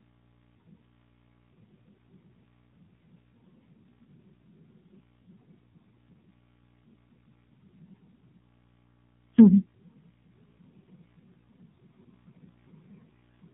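Throughout the recording, the speech carries the signature of the AMR narrowband mobile codec. Everything above 4 kHz is missing, consistent with 8 kHz sampling, so consonants lose their edge and the voice sounds boxed in. The codec rebuilds the voice from a vocal-tract model fed with sparse pulses, and the plainly audible buzzy, synthetic colouring suggests one of its lower modes, around 7.4 kbps.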